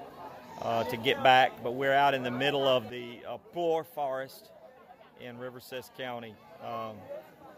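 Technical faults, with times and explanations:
2.90 s to the end: sudden gain jump. At 2.90 s the level drops by about 9 dB in a single step, with no fade between the louder and quieter parts. The background noise falls by the same amount at the same instant, so the whole signal was scaled, not just the sound in front. The drop then holds to the end. The likely cause is a digital gain change applied at once instead of being ramped in.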